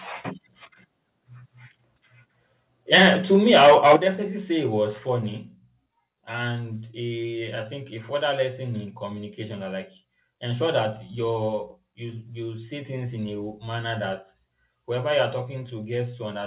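From 2.93 to 3.96 s the loudest syllables carry a harsh, crackling edge from flattened peaks, about 8 dB past the converter's limit on roughly 7 percent of samples. That points to microphone overload, likely from input volume set too high. It is distinct from codec distortion because it follows the peaks.

The microphone volume stepped down at 2.95 s (about 4 dB), 3.96 s (about 10 dB), 4.98 s and 15.33 s (about 2 dB each). Voice and background drop together in single steps, not in a gradual fade, which fits call software cutting the gain. The narrow G.711 call band, with nothing above 4 kHz, is also audible.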